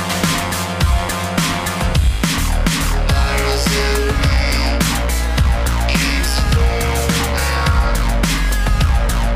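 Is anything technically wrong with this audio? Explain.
No, nothing technically wrong is audible in this audio.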